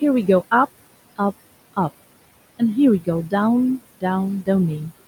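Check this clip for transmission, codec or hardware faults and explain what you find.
One fault runs through the whole speech clip: noise suppressor artifacts. Throughout, a suppressor pulls steady-noise bands down by about 20 dB frame by frame, so the room noise, sitting about 17 dB below speech, drops between phrases and swells under them.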